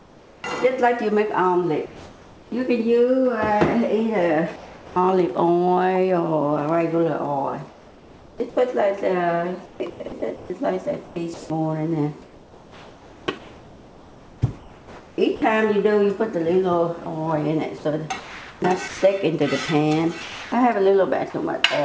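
Discontinuous transmission is the likely cause of the comfort noise in place of the background at 0.00–0.44 s, 1.86–2.52 s, 4.56–4.96 s and 7.68–8.40 s: the sender went quiet between sounds, and the receiver filled each gap with a steady, featureless synthetic hiss about 2 to 4 dB below the real background. A voice detector switching on and off repeatedly likely chopped the sound from 9.66 to 15.42 s, swapping roughly 3.5 s of it for comfort noise, and again from 18.20 to 21.34 s, swapping about 0.9 s, so the audio turns choppy. At 17.04 s the sound was dropped by the voice detector, likely because it took a quiet moment for background, leaving a 20 ms blink of noise. All of this arrives through a call codec path whose top end stops at 8 kHz, which fits G.722.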